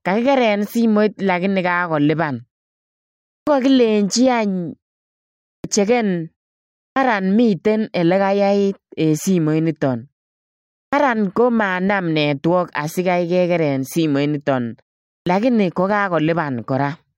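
Five times in this speech the output comes back from silence a beat late, a clipped start after a pause: at 3.38, 5.55, 6.87 (right before "miten ele"), 10.84 and 15.18 s. Each time roughly 85 to 92 ms of onset is lost after pauses of 0.44 to 0.95 s, as the output wakes back up. The speech jumps in abruptly, missing its first sounds.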